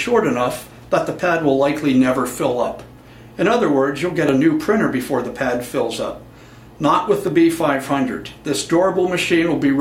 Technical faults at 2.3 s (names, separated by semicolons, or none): none